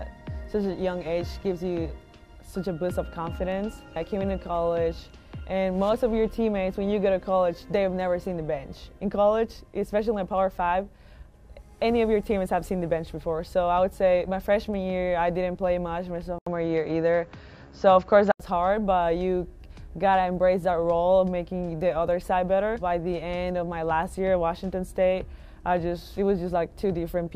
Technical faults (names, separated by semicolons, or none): input switched to a poorer device